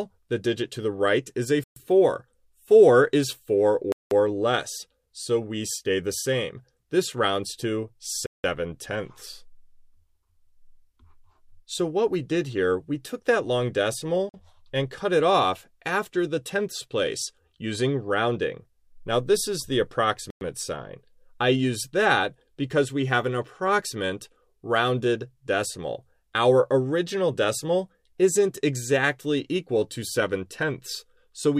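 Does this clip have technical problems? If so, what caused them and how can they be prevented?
Yes. The sound drops to silence five times, at 1.64 s for 125 ms, 3.92 s for 191 ms, 8.26 s for 177 ms, 14.29 s for 48 ms and 20.30 s for 107 ms, then resumes. This is likely a Bluetooth stall: interference delayed packets until the headphones' buffer emptied. Keeping the phone close, with nothing blocking the link and fewer busy 2.4 GHz devices nearby, prevents it.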